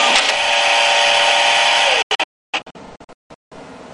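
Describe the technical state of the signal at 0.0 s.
At 0.0 s the audio is intact, with no technical fault present at that moment.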